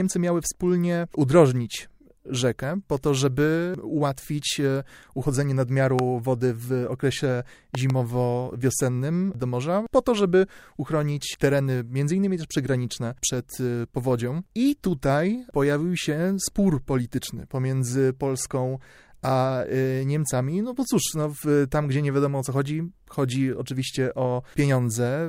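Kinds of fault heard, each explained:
Loud pop: a sudden pulse of voltage added to the signal, likely from a plug, switch, static discharge or driver glitch, heard as a sharp pop on top of the speech, which carries on underneath. A single pop at 5.99 s, between "żeby ułatwić e uchodzenie" and "wody w okresie", stands far above the speech. A weaker pair follows from 7.75 to 7.92 s, after "wody w okresie". Unlike a dropout, nothing is lost.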